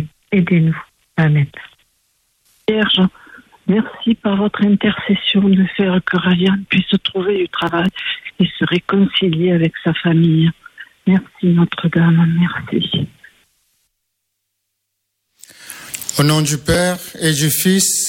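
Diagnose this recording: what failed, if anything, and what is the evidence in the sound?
Processor overload crackle from 7.36 to 8.30 s and again from 16.74 to 17.21 s, at the driver and buffer stage. Short buffers of a few milliseconds repeatedly missed their deadlines, roughly ten and then fifteen times, and each skipped buffer left a hard-edged gap, producing a gritty crackle that stops when the load clears.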